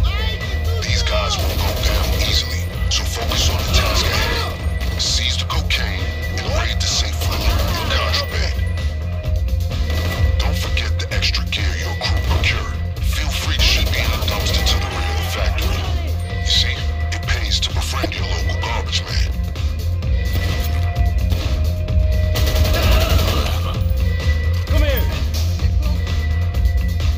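Damaged data in a compressed stream appears from 18.02 to 18.06 s. For about 34 ms, part of the encoded stream no longer holds valid frames, so the decoder misreads or discards what arrives, loses its place and has to hunt for the next clean frame header before normal decoding can resume. The result is a brief chirp, squawk, click or short hole that breaks into the sound at that instant.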